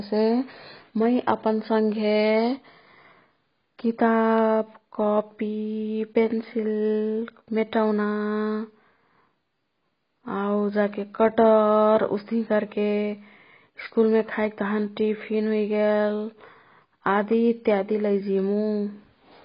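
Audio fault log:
throughout, AAC compression: the speech sounds dull and smeared, with nothing above 5.1 kHz and a warbly, fizzy edge on sibilants. That's likely heavy AAC-LC coding at a very low bitrate, around 16 kbps, forcing a low cut-off and coarse quantisation across the remaining spectrum.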